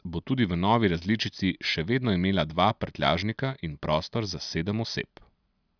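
No technical faults can be heard anywhere in the recording.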